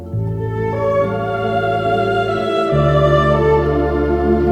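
No technical faults can be heard anywhere here.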